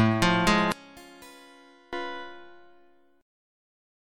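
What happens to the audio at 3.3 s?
Nothing goes wrong at 3.3 s; the audio plays through that moment intact, with no dropout, click, glitch or other fault to be heard.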